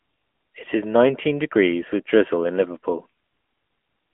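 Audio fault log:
Throughout: AMR narrowband mobile codec. The whole clip has that classic phone-call sound. The speech sits in a narrow band of roughly 200 Hz to 3.4 kHz, and nothing gets through above 3.5 kHz, so the air and sibilance are gone. The codec damage is plainly audible: the voice has a buzzy, synthetic edge because the codec rebuilds it from a vocal-tract model fed with sparse pulses. It runs in a higher-rate mode, roughly 10 kbps.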